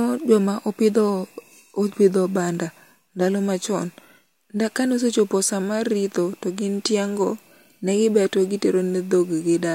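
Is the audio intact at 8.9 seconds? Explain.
Yes, the speech at 8.9 seconds plays through cleanly, with no dropout, click, distortion or other fault at that moment.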